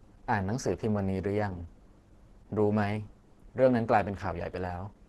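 Throughout the speech, the likely cause is Opus compression starved of bits, consistent with roughly 12 kbps and its hybrid speech mode. Nothing sounds above 12.1 kHz, and the heavily squeezed coding leaves the speech muffled, hoarse and grainy.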